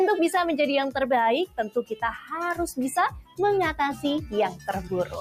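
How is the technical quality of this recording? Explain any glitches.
The recording is compromised by processing. A noise suppressor applied to music or sounds stays active throughout, pumping the level by around 10 dB as it treats sustained tones and tails as noise. On a waveform the envelope breathes unevenly.

The sound is cut by the noise suppressor at 1.76–1.98 s (drop of about 15 dB), 3.13–3.39 s (about 17 dB) and 4.50–5.14 s (about 9 dB). Held content sinks and decays are clipped short, leaving dark gaps in the spectrogram.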